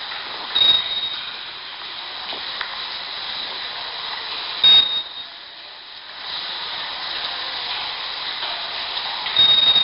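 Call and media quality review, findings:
Gritty hiss riding every loud sound, whole clip, smeared attacks, nothing above 5.3 kHz. 4-bit ADPCM compression, heavy: coarse adaptive steps lag transients, and the rate points to about 11 kHz sampling.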